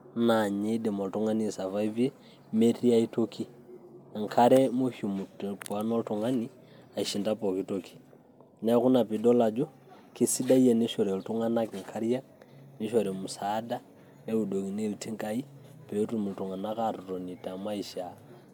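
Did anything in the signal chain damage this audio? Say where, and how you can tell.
Yes. Throughout the speech, the audio sounds swirly, smeared and hollow, with consonant attacks blurred, more than a single MP3 pass at 128 kbit/s would explain. The likely cause is generation loss at the codec stage: about four rounds of decoding and re-encoding, each quantising on a shifted frame grid so the errors pile up. On a spectrogram this shows as patchy holes and flickering smear in the upper bands below the 20.1 kHz ceiling, and softened onsets in the waveform.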